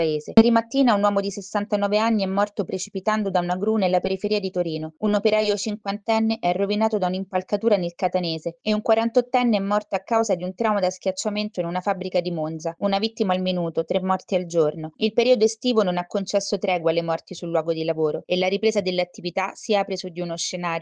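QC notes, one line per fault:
No faults found anywhere in the audio.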